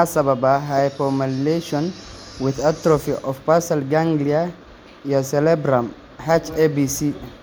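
No technical faults can be heard anywhere in this speech recording, with the signal holding steady and continuous from its opening moment to its last.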